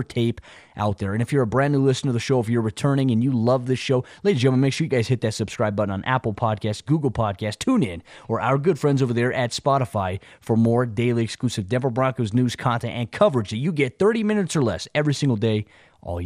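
MP2 compression runs throughout the clip. The speech sounds dull, with a gurgling, granular roughness, likely from MPEG Layer II coding starved of bits, consistent with about 80 kbps. Upper sub-bands switch off and flicker, and the remaining bands are coarsely quantised.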